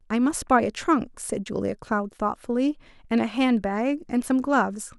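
A short speech recording, with no technical fault to be heard anywhere in it. There is nothing here that needs a time stamp or a cause.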